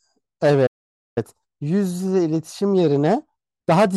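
A playback stall at 0.66 s, likely from the player running out of buffered data or having its output thread blocked, leaves nothing reaching the output for about 0.50 s. The speech cuts off in mid-flow and the track falls completely silent until 1.18 s. Delivery then resumes abruptly, and the half-second hole reads as a sudden dropout rather than a natural pause, breaking the rhythm of the phrase it interrupts.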